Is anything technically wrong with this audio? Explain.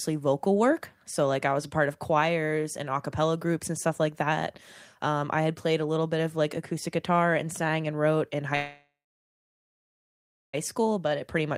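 Yes, there are two faults.

A call audio freeze runs from 8.55 to 10.55 s, after "sang and wrote in". Delayed packets likely drained the jitter buffer. The last sound trails off into about 1.6 s of silence, then resumes with nothing lost.

A jitter buffer speed-up follows from 10.81 to 11.49 s, just before "stopped when I was". The receiver trims brief pitch-period slices, about a twentieth of a second in total, so the speech runs 7% faster at unchanged pitch.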